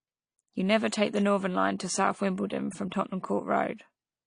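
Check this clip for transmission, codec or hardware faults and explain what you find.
Two faults stand out in this speech: plainly audible codec damage across the whole clip, and one pre-echo near the start.

AAC compression runs throughout, and plainly. Nothing is present above 10.2 kHz, so the top of the sound is cut away and the voice turns dull. The likely cause is AAC-LC at a low rate, which fits roughly 32 kbps. Too few bits for each frame forces the coder to drop the highest band and quantise the rest coarsely, which smears detail. On a spectrogram the energy stops at a flat ceiling near 10.2 kHz.

Pre-echo occurs from 0.89 to 0.92 s, a smear lasting about 35 ms. The codec spreads its quantisation noise evenly over each transform block. When a sharp onset lands late in a block, noise sized for that loud moment also fills the quiet stretch before it. This is heard as a brief hiss ahead of the attack, which itself sounds softened. 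On a waveform, low-level noise rises just before the transient rather than after it.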